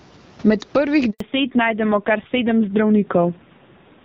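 Gain pumping runs through the whole recording, with a swing of about 15 dB. The likely cause is a fast limiter fighting an input set far too hot. On the waveform the noise floor bulges between phrases and the peaks look flattened to one height.

At 1.10 s a handover gap opens. The sound fades within a few tens of milliseconds and stays silent for 100 ms, until 1.20 s, as the call switches networks and no frames arrive. The waveform shows a flat line, and the spectrogram shows a clean vertical blank band.

From 1.20 s to the end, the call falls back to narrowband. Before the gap, the wideband codec's full band is audible, along with the room noise. Afterwards the speech turns dull and rough, with nothing above 4 kHz. This points to a low-rate AMR-NB mode near 5.9 kbit/s. The spectrogram shows a hard ceiling at 4 kHz, and everything above it is empty.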